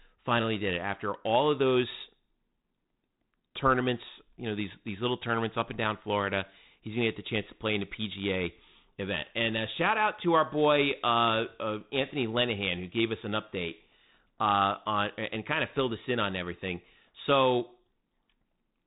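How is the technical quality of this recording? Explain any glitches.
Nothing stood out on listening to this speech recording, with the narrow telephone-band sound, topping out a little below 4 kHz, being just what its 32 kbit/s G.726 coding gives rather than a glitch.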